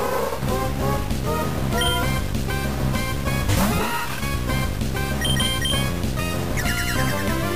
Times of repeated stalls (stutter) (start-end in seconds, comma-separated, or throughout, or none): none